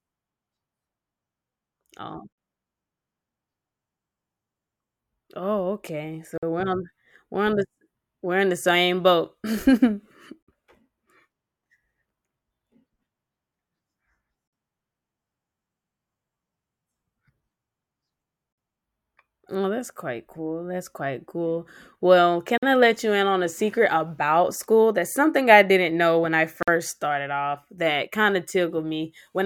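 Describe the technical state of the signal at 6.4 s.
Right after "oh okay", the speech drops into a hard-edged hole of silence from 6.38 to 6.43 s, about 50 ms long. This is a gap between chunks: the audio arrives in 4-second chunks, and silence is inserted at the join rather than sound being lost.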